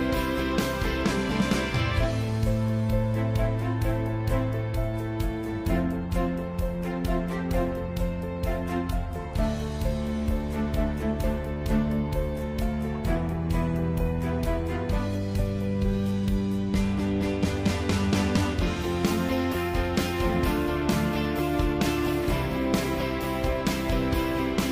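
No audible technical faults anywhere in the recording.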